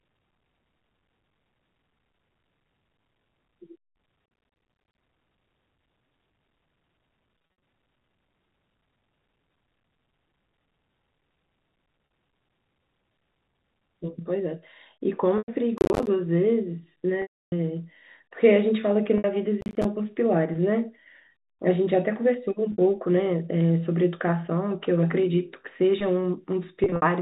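A telephone-band speech recording carried over G.711 A-law coding, which passes nothing above 4 kHz, with two kinds of fault. Processor overload crackle tears through the sound at 4.26–5.01 s, 15.78–16.07 s and 19.61–19.85 s. Short buffers, around 10 ms each, miss their deadlines, and each miss drops to silence. Many such misses in a row give a gritty, hard-edged crackle rather than a smooth gap.

Packet loss with pitch repetition occurs at 7.38–7.62 s, 12.06–12.10 s, 15.38–15.48 s, 17.22–17.52 s, 19.18–19.24 s, 22.72–22.78 s and 26.84–27.02 s. The receiver repeats the last pitch period to cover the lost audio. This sounds like a briefly held, buzzy tone, unlike the crackle's tearing. The 300 ms loss at 17.22 s is long enough to fade into silence before the sound cross-fades back.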